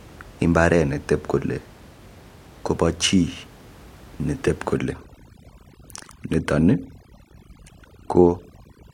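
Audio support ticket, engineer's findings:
Overdone noise removal, 4.77 s to end of clip. Background room noise, about 25 dB under speech before this point, drops and breaks up into twinkling specks. Noise reduction set too strong, muting bands near its noise estimate and taking quiet speech detail with them.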